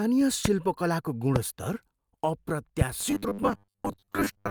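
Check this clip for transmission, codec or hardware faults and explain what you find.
Two kinds of fault are present: loud pops and robotic sound from repeated short buffers.

Loud pops occur at 0.45 to 0.48 s and 1.36 to 1.38 s. Each is a single sharp pop, about 20 dB and about 15 dB above the speech. The likely cause is a voltage pulse, from a switch, static or a driver glitch. The speech continues underneath.

Robotic sound from repeated short buffers runs from 2.99 s to the end. The speech becomes a rigid, metallic buzz at 100 Hz. New audio is likely arriving too seldom, so a 10 ms piece is replayed to fill the gaps. Most of the real audio is skipped.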